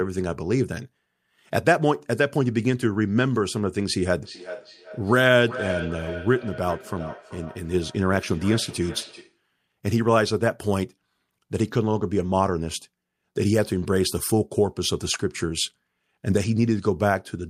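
From 4.22 s to 9.44 s the speech picks up a feedback echo between two devices. Two devices in the same room appear to share the call: one plays back what the other's microphone sent, and that microphone captures it again. Each echo canceller only removes its own device's playback, so the returning copy survives. Each phrase comes back at a steady interval of roughly 400 ms, thinner and more ringing, peaking about 12 dB below the direct speech.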